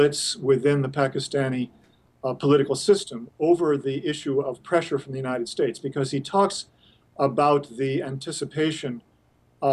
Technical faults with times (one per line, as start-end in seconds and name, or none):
none